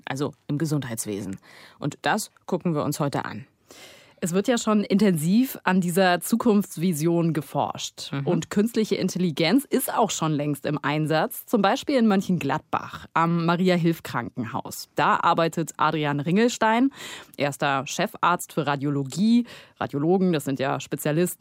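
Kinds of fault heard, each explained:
No technical fault can be heard anywhere in the speech recording.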